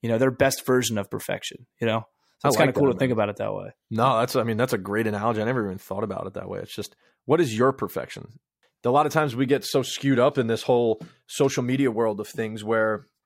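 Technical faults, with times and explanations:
Nothing in the speech stood out as a technical problem on listening.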